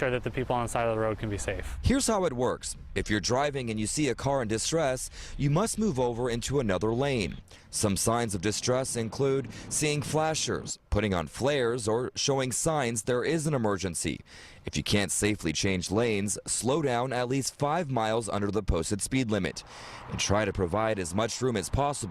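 Nothing here trips any alarms, since there's no dropout, glitch or distortion to point to anywhere in the recording.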